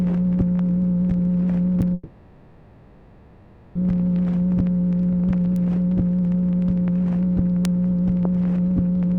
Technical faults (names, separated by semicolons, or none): bit error spike; long network dropout